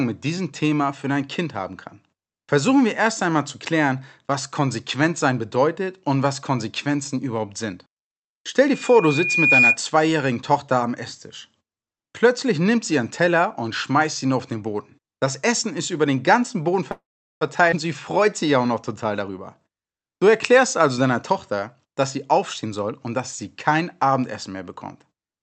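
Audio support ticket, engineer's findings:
Loudspeaker feedback squeal, 8.67–9.77 s. A 2.4 kHz tone swells over roughly a second to sit about 5 dB above the speech. Mic is picking up its own loudspeaker, and loop gain exceeds unity at that frequency. Acoustic echo path or device.

Call audio freeze, 16.91–17.43 s. Audio stalls for about half a second, with a short decaying fill tailing into roughly 0.39 s of silence. Playback then resumes where it stopped, with nothing lost and latency raised by about 0.5 s. Likely delayed packets draining the jitter buffer.

Skip ahead, 17.71–17.74 s. Abrupt forward jump with only a tiny joining fill. Roughly a third of a second of speech is missing, with the two sides butted together. Audio dropped in transit or by an overflowing jitter buffer, so about 300 ms of delay clawed back.

Jitter buffer speed-up, 19.21–23.19 s. Speech runs at 106% with pitch unchanged and sounds slightly hurried. 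The receiver trims short pitch-period slices repeatedly, removing around 300 ms in total, to pull excess buffered audio back to its latency target. Opus call path band-limited at 8 kHz.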